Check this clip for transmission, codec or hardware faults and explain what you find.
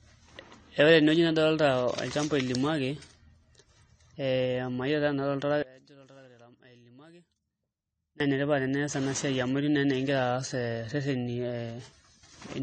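Two faults are audible: codec damage across the whole recording, and a stretch where the speech nearly disappears.

AAC compression runs throughout. Nothing is present above 9 kHz, and the damage is plainly audible. At a low bitrate the encoder can't afford all of the spectrum, so it drops the top band and coarsens what remains. The speech is dull and smeared, and sibilants and sustained sounds have a warbling, fizzy edge. The likely cause is AAC-LC at about 32 kbps.

One channel inverted from 5.63 to 8.20 s is the likely cause of a drop of about 24 dB. When the two channels are summed to mono with one flipped in polarity, everything they share cancels. Centred speech collapses to a faint residue made of only the small differences between left and right. Full level returns at 8.20 s.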